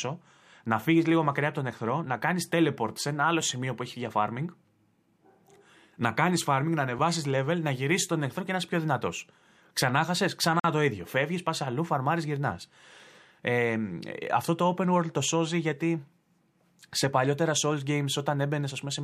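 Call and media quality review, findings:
Block of digital silence, 10.60 to 10.64 s, just before "το ίδιο". Output buffer probably not filled in time; 46 ms of samples zeroed, which fits a 2048-sample block. Hard cut to silence and back: audible hole.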